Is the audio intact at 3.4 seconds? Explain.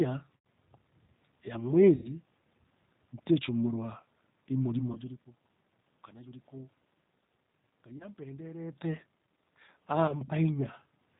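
No. G.729 codec damage runs throughout, including 3.4 s: at 8 kbit/s the speech is resynthesised from a vocal tract model and sparse pulses, cut off above 4 kHz, and sounds plainly rough and synthetic.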